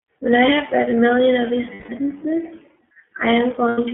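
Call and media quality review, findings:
iLBC codec, whole clip: narrowband, nothing above 3.4 kHz or below 200 Hz, rough synthetic edge on speech, consistent with iLBC at about 13.3 kbps and 30 ms frames.

Lost iLBC frames, 1.74–1.90 s (150 ms) and 3.69–3.79 s (90 ms): held buzzy vowel as the decoder repeats the last pitch cycle with noise, then recovers immediately.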